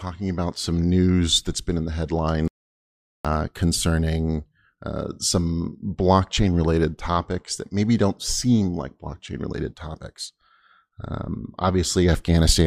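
At 2.48 s the speech cuts off abruptly and the clip falls into an audio dropout to silence lasting about 0.77 s, resuming mid-flow at 3.25 s. The gap holds silence with no room tone, so the input was likely lost while recording continued writing silence. On a waveform it appears as a flat line between hard edges; a spectrogram shows a dark vertical band.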